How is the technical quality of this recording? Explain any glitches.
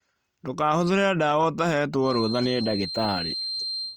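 There's one real problem here: a feedback whistle that comes in at 2.0 s and runs right to the end at about 3.97 s. It's a thin, steady tone at 4.2 kHz sitting roughly 10 dB under the speech, wavering a bit in level rather than building up. The likely cause is a loudspeaker-to-microphone loop parked right on the edge of feedback, so that one frequency keeps ringing without ever tipping into a full howl.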